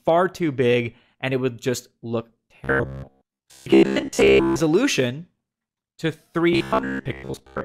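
Robotic sound from repeated short buffers runs from 2.64 to 4.62 s, likely because audio arrived too seldom and a roughly 15 ms slice was looped, forcing a rigid 66.7 Hz buzz while most of the real sound is skipped. An overlap between stream segments at 4.28 s, where 1.0 s segments meet, trims away about 14 milliseconds of sound, producing a tiny skip. The same 66.7 Hz buzz returns from 6.53 s to the end.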